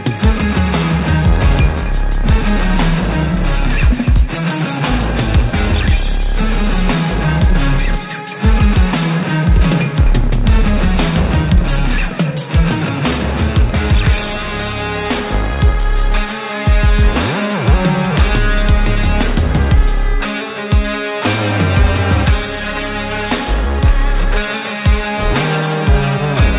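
No technical faults are audible anywhere in this recording.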